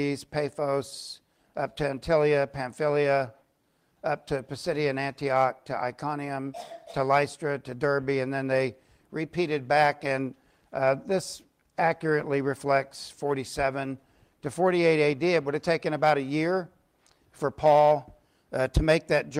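Nothing is technically wrong with this audio clip.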